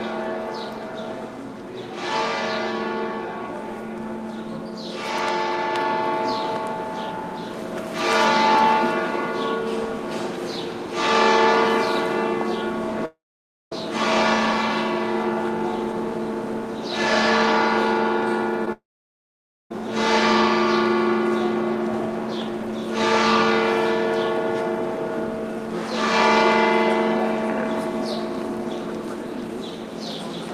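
At 13.05 s the sound breaks off, its last moment drawn out into a short fading buzz before roughly half a second of silence; normal audio resumes at 13.73 s with about 0.66 s gone. This is a long network dropout, likely a stall in packet delivery long enough that the receiver's concealment ran out and fell to silence rather than bridging the gap.

From 18.65 to 18.68 s a short concealed packet loss appears as a brief smear. About 20 ms of audio failed to arrive in time, and the decoder patched the hole by extending the preceding sound, then blended back into the real signal. The patch is short and the result is a momentary blur rather than a clean break.

Straight after, at 18.72 s, a second long network dropout begins. The sound again trails off into a fading buzz, then silence for nearly 0.9 s, and returns at 19.72 s missing about a second of material.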